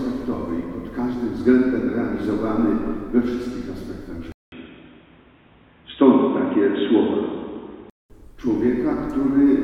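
At 4.32 s there's a short gap of about 200 ms, then the sound goes dull, loses everything above 3.8 kHz, shifts level by about 5 dB and picks up faint new background noise until 8.10 s. That's likely an input switched to a poorer device.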